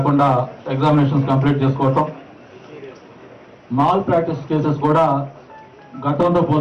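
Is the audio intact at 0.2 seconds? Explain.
Yes, the audio is intact at 0.2 seconds, with no dropout, click, distortion or other fault at that moment.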